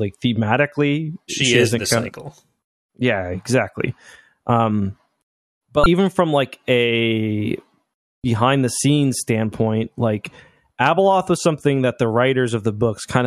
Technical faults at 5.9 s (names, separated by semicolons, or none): damaged data in a compressed stream